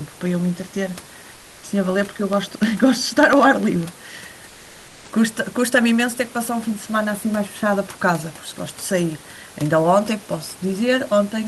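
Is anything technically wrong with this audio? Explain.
Yes, there are two faults in this speech clip.

Comfort noise in place of the background, from 1.34 to 1.63 s: for 290 ms the real room background is replaced by steady, featureless synthetic noise about 2 dB quieter, most likely because Opus discontinuous transmission stopped sending during the pause and the receiver filled the gap.

Periodic USB or driver dropouts, from 2.03 to 3.83 s: every 0.1 s, about twenty times, a tiny sliver of audio, a fraction of a millisecond, is lost and replaced by silence when the bus or driver stalls, producing a regular train of ticks over the speech.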